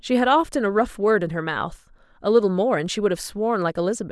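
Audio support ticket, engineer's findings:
Listened to the speech recording in full and found nothing to report, so no fault to trace on this one.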